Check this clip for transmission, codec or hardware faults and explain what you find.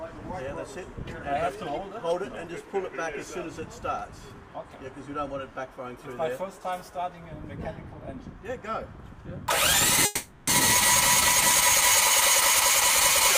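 One transmission fault stands out: a call audio freeze from 10.05 to 10.49 s. The sound stalls into a fading buzz, likely from delayed packets emptying the jitter buffer, then resumes where it stopped, nothing lost but running about 420 ms late. A spectrogram shows smeared, flat-lined partials decaying there; the waveform shows a repetitive tapering stretch, no silence.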